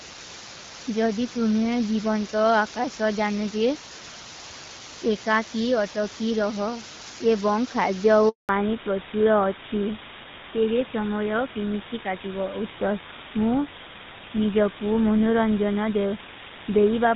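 Throughout, the samples are rounded to very few levels, which fits a 5-bit depth, with dither added before rounding. This is low bit depth with dither: the rounding error becomes a constant, even hiss sitting only about ten decibels below the speech, with no added distortion.

At 8.29 s the call is passed from one network to another, and no speech frames arrive during the switch. This handover gap leaves the voice fading out within a few tens of milliseconds and then silent for 200 ms, until the new link starts at 8.49 s.

From 8.49 s to the end, the call has a fallback to narrowband. The change in sound is consistent with it leaving the AMR wideband (HD Voice) codec, which likely ran at 12.65 kbit/s, for an older GSM full-rate link at 13 kbit/s. Everything above 4 kHz disappears, so the voice sounds duller and rougher than before the gap.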